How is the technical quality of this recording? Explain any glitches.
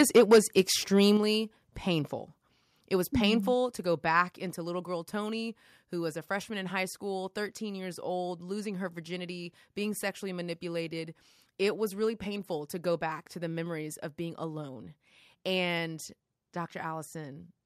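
The recording has two related faults in its opening seconds: clipped peaks and a series of sudden level drops.

Microphone overload: the input volume was likely set too high, so peaks ran about 8 dB past the converter's limit from 0.0 to 0.61 s, flattening around one sample in twenty. A milder overrun of about 1 dB follows at 0.98–1.1 s. The cut-off tops give the loudest speech a harsh, crackling edge.

Microphone volume stepped down: the call software likely reacted to that overload by lowering the device's input volume in single steps. Speech and background drop abruptly by about 2 dB at 0.17 s, 5 dB at 1.17 s, 1 dB at 2.19 s, 3 dB at 3.48 s just before "to go back", and 2 dB at 4.5 s, before "little girl".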